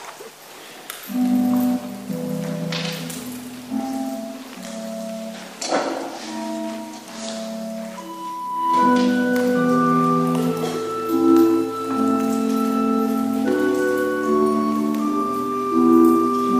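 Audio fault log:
No fault to log for this audio.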